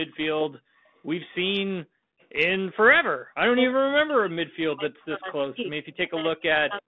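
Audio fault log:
2.20–2.26 s, echo leak: a faint delayed copy of the voice, roughly 40 dB down and 342 ms late, likely from a loudspeaker echo the canceller missed.
3.53–6.87 s, speech suppressed in double talk: the voice drops, up to around 40 dB, for about three seconds, likely from the canceller muting both talkers at once.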